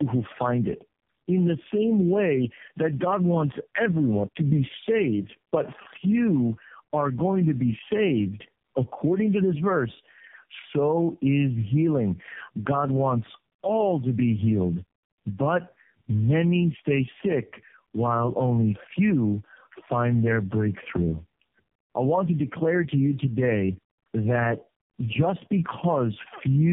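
Throughout the speech, tandem speech coding: the sound is rough, muffled and warbly, with nothing above 3.6 kHz. Unlike one low-bitrate codec, the artefacts compound. The texture suggests three narrowband coders in a row, like G.729A then AMR-NB twice, each re-coding the last one's damage.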